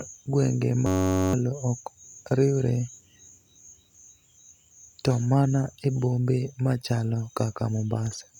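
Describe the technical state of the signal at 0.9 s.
At 0.9 s the signal is caught in a system hang loop running from 0.86 to 1.33 s, just before "ok oriwre". A 10.67 ms slice, which fits a 512-sample buffer, repeats 44 times, giving a steady 93.8 Hz buzz and about half a second of missing speech. The waveform shows identical repeating cycles, and the spectrogram shows evenly spaced harmonic lines at multiples of 93.8 Hz.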